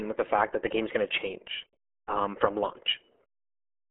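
From start to finish, the speech carries the sound of the RealAudio 14.4 codec. This is an early low-rate speech coder built for dial-up modems. The heavy damage fits a stream of about 8 kbit/s. The band is narrow, roughly 250 Hz to 3.4 kHz, and nothing survives above 3.8 kHz. The top end is simply gone. Speech sounds muffled and boxed in. Coarse coding adds a gargly, watery roughness to every phrase.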